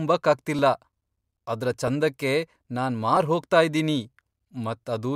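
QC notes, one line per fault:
0.59 to 4.46 s, clock drift buffer slips: A short click recurs every 1.29 s over the speech, about four in all. The spacing stays steady. This points to two devices on separate clocks, likely drifting apart by roughly 500 ppm. The buffer between them slowly fills or drains. When it hits its limit, a block of a few dozen samples is dropped or repeated. That sudden jump in the waveform is the click.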